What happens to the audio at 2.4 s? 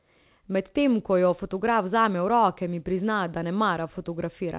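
Nothing goes wrong at 2.4 s: the speech there carries on intact through the call path, with its usual narrowband limit of nothing above 4 kHz.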